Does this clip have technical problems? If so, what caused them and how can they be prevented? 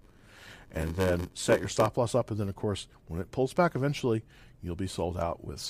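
Yes. A block size mismatch (padded) runs from 0 to 1.89 s, ending just before "loss up". One stage delivers shorter blocks than the next reads, which fits a 512-sample read buffer, and the missing part of each block is zero-filled. These regular silent gaps produce a buzz at about 94 Hz, and the speech plays at 0.861 times its normal speed while keeping roughly its normal pitch. To prevent it, make every stage agree on one block size, or buffer and re-chunk the audio between stages instead of padding short blocks with zeros.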